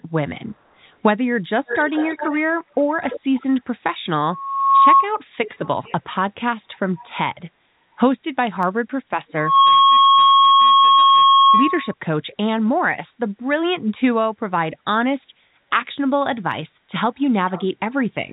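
Echo leak, from 1.66 to 2.37 s and again from 3.1 to 3.2 s: a faint copy of the speech returns 345 ms late, about 15 dB below it. This is likely a far-end loudspeaker whose echo canceller failed to subtract everything its microphone picked up, so the residue was sent back down the line.

Loudspeaker feedback squeal, from 4.24 to 5.09 s: a steady 1.1 kHz tone swells over about half a second until it sits roughly 10 dB above the speech. A microphone is hearing the loudspeaker it drives, and at that one frequency the loop gain exceeds unity, so the tone keeps feeding itself.

The echo leak returns from 5.45 to 5.95 s and from 7.0 to 7.08 s, still 345 ms behind but quieter, about 25 and 30 dB down.

Dropped samples at 8.63 s: a single sharp click, likely where a handful of samples vanish and the waveform jumps ahead by well under a millisecond. This brief gap removes no audible sound.

The squeal returns from 9.37 to 11.94 s at 1.1 kHz, building faster, within about a third of a second, and lasting much longer.

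A second click, likely from dropped samples, comes at 16.52 s, and a last echo-leak fragment, about 25 dB down, from 17.48 to 17.66 s.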